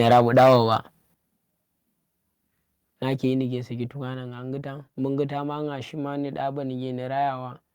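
Microphone overload runs from 0.0 to 0.75 s. The input level sits about 6 dB above what the converter can handle, so the peaks are sliced flat at the converter's limit, and roughly 7% of the samples are clipped. The loudest syllables take on a harsh, crackling, buzzy edge. The likely cause is the microphone's input gain being set too high for the talker's level at the start of the speech.

Microphone volume stepped down occurs at 0.13 s, 1.14 s and 4.14 s, the last just after "ƙyi ndi saki to". Each is an abrupt one-step drop in level, about 4 dB, then about 9 dB, then about 3 dB. Voice and background fall together, so the room tone thins out at the same instant the speech does. This is likely the call software's automatic gain control reacting to the microphone being too loud or clipping by cutting the device's input volume.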